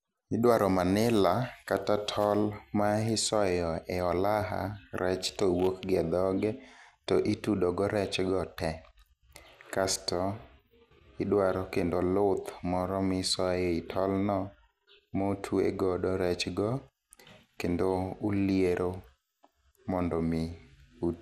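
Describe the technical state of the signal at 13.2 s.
The signal at 13.2 s is likely suffering MP2 compression, as it is throughout the clip, at a rate consistent with about 80 kbps. Starved of bits, the upper sub-bands drop in and out, and nothing remains above 15.8 kHz, leaving the speech dull with plainly audible gurgling, granular distortion.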